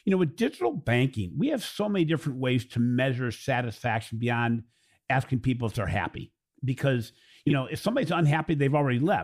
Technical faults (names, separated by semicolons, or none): frames out of order